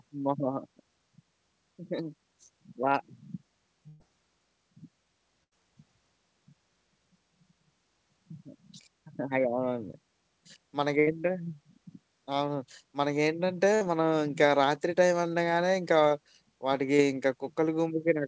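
Burst of packet loss hits this speech recording at 3.88–4.02 s, 5.44–5.53 s, 10.99–11.09 s and 13.75–13.83 s. Runs of 60 to 120 ms never arrived, so the receiver stretched and faded the last sound before jumping ahead. Short concealed packet loss follows at 16.09–16.13 s and 16.97–17.01 s. About 20 ms went missing each time and was patched from the preceding sound, leaving a brief smear. Throughout, the call codec leaves nothing above 8 kHz, which fits G.722.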